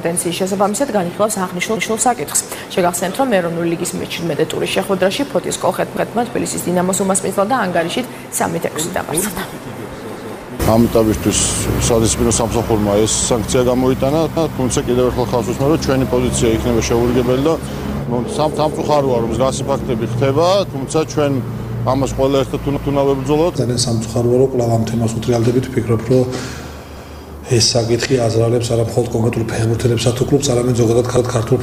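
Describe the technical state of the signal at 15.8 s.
At 15.8 s the signal is intact, with no audible dropout, distortion, glitch or other fault at that point.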